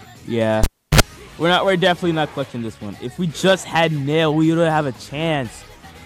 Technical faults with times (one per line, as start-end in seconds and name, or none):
0.64-1.00 cable pulled and plugged in